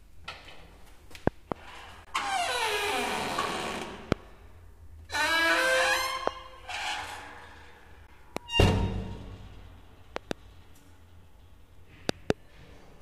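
Right at 1.27 s a loud pop lands, a double one running to 1.54 s, then more at 4.12, 6.27, 8.37, 10.16 to 10.33 (a pair) and 12.09 to 12.32 (another pair). They jump roughly 20 to 25 dB above everything while the sound keeps going underneath, most likely a voltage spike from a plug, switch or driver glitch. Between those, there's a gap at a join of encoded pieces at 2.05 to 2.07 s (22 ms) and again at 8.07 s (16 ms), six seconds apart. Separately encoded chunks were butted together with their start delay and end padding left in, so the sound drops out briefly and resumes where it left off.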